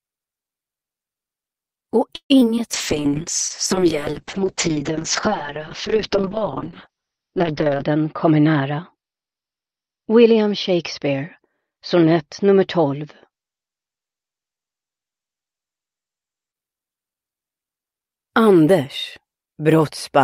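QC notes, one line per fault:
2.15–2.59 s, repeated packet loss (robotic sound): four holes open in quick succession, the longest 146 ms. About 41% of this span is patched by stretching the last good fragment, and a further 60 ms simply drops out. That is why the sound turns choppy, with missing pieces. Unlike a bitrate drop, the damage comes in discrete stutters and gaps rather than an even, continuous coarseness.
2.75–16.59 s, call bitrate drop: the encoder was forced into far coarser coding. The audible bandwidth collapses from a full 20 kHz to about 6 kHz, and the sound becomes muffled, rough and watery, at its worst for roughly 5 s. The level of degradation fits a fall from around 48 kbps to 6 kbps. Nothing drops out and nothing repeats; the whole stretch is simply dull and smeared until the rate recovers.
8.25–9.65 s, jitter buffer speed-up: the receiver held too much queued audio and trimmed it by cutting many short pitch-period slices, removing around a seventh of a second in total. 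Playback runs about 10% fast at unchanged pitch, so this section sounds hurried and its timing tightens. It differs from packet loss in having no gaps or metallic repeats. The material is just compressed in time, and it sits inside the muffled low-bitrate stretch.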